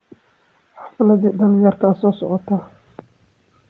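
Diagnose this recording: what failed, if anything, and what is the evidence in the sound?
The fault is automatic gain rising in the call processing stage. From 0.68 s to 2.5 s the level climbs steadily by about 3 dB, and the background noise floor swells along with the speech, which rules out a louder talker. The automatic gain control judged the input too quiet and raised its gain gradually. A waveform shows the envelope widening over those 1.8 seconds. A spectrogram shows the whole band, capped at 8 kHz by the call path, brightening together, noise included.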